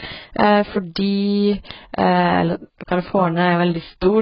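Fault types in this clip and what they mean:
AAC compression: The speech sounds dull and smeared throughout, with nothing above 5.4 kHz and a warbling, fizzy texture on sibilants. This heavy damage likely comes from AAC-LC coding, which discards the high bands and coarsely quantises the rest, as a bitrate near 12 kbps would.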